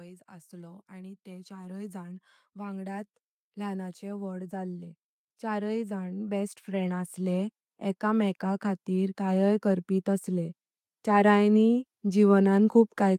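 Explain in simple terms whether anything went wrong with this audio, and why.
Yes, something's off here: automatic gain rising, running from about 0.05 s right through to the end. The recording's automatic level control decided the input was too quiet and kept turning itself up, bit by bit. Because it boosts everything it hears, the speech and the background noise swell together, so the whole thing creeps louder over time rather than the talker actually getting closer or raising their voice.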